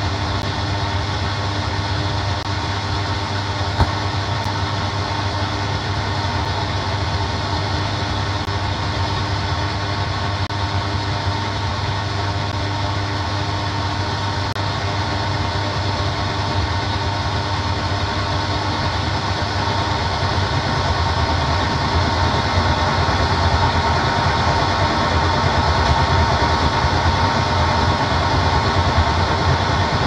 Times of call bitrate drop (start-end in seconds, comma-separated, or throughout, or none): none